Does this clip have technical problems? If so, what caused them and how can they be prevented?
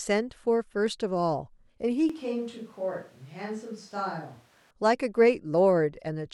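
Yes. A switch to a distant microphone occurs from 2.10 to 4.71 s. The speech abruptly turns roomy and hollow, loses bass, drops roughly 5 dB, and carries room noise about 30 dB below it, likely because the close microphone's signal failed and a farther microphone took over. To prevent this, monitor the close microphone throughout and record a redundant close-mic channel, so a dropout never forces a fallback to a distant one.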